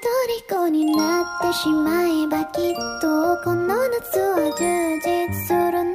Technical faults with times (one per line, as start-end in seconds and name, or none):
none